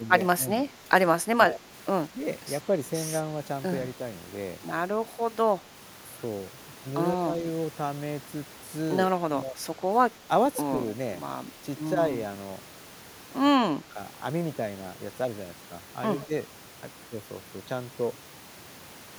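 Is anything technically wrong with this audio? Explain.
Yes. Speech suppressed in double talk appears seven times: 0.0–0.09, 1.48–1.7, 2.09–2.18, 7.16–7.44, 9.19–9.57, 10.22–10.3 and 13.8–13.98 s. The voice dips briefly, by about 5 dB at the mildest and about 15 dB at the deepest, around 2.1, 7.2 and 9.2 s. The likely cause is an echo canceller that, with both sides talking at once, could not tell this talker from loudspeaker echo and turned the microphone down.

Echo leak occurs at 16.19–16.26 s: a faint delayed copy of the voice, trailing by 122 ms and sitting about 25 dB below the speech, is heard as a short ghostly scrap. It likely comes from a far-end loudspeaker whose echo canceller failed to remove everything its microphone picked up, so a remnant of the voice was sent back.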